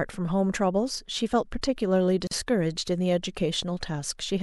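At 2.27 s the speech drops into silence until 2.31 s, a 40 ms hole. This is a gap at a join of encoded pieces. Two separately encoded sections were joined untrimmed, so encoder delay and end-frame padding remain. The edges are smeared by the codec.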